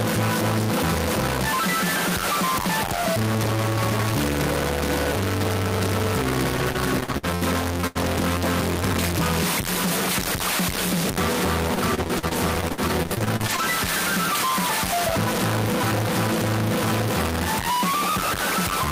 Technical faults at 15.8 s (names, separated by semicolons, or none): stuck bit